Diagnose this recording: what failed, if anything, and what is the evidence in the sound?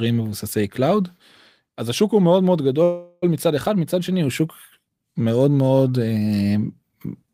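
From 2.83 to 3.24 s the speech stalls into a fading buzz or hiss, then resumes intact about 390 ms late: a call audio freeze, likely a network jitter-buffer underrun.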